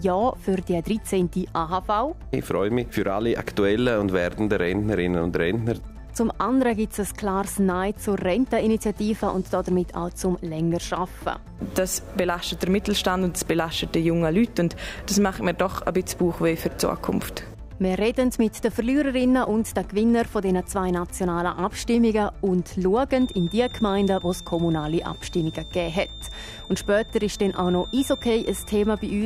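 A loudspeaker-to-microphone loop likely hovers at feedback from 23.08 s to 29.25 s, leaving a thin 3.6 kHz feedback whistle well below the sound.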